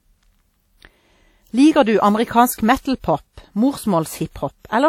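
Across the whole clip the speech carries plainly audible transform-codec damage, most likely from WMA compression. The coarse quantisation noise smears over tens of milliseconds, leaving a ringing, washy texture and a hiss that swells and fades with the signal. Nothing is present above 19.6 kHz, and the overall damage fits an early WMA encoder at a low bitrate around 48 kbps.

From 2.54 to 2.58 s there is pre-echo before a sharp attack. Because the codec spreads its noise across the full block, the hiss sized for the loud onset leaks backwards about 41 ms into the quiet gap before it. The attack sounds softened and smeared.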